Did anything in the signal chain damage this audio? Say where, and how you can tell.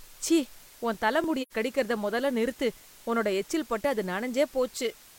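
Yes. The low bit depth with dither comes from sample-format conversion: a constant, even hiss sits about 25 dB below the speech, consistent with roughly 7-bit rounding with dither turning the error into white noise.

Clock drift buffer slips are the likely cause of regular clicks every 1.3 s from 1.24 to 5.14 s, about four in all, where a buffer between mismatched clocks drops or repeats a few dozen samples.

AAC frame loss with muting in the codec leaves a soft-edged 85 ms hole from 1.42 to 1.53 s, which fits two lost frames. The decoder zeroed their spectrum, so the gap fades out and back in.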